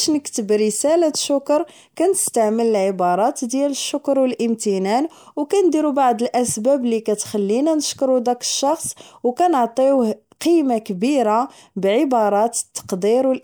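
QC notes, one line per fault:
Nothing stood out on listening to this speech recording.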